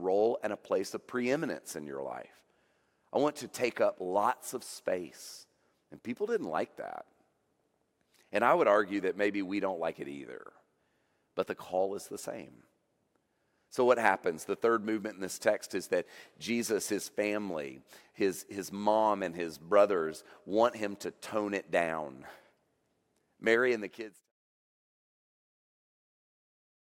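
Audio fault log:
No faults heard in this speech.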